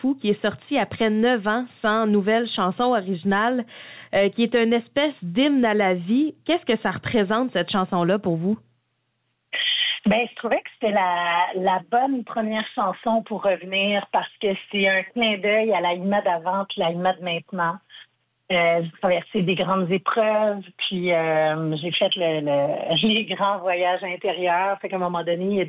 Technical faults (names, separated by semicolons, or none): none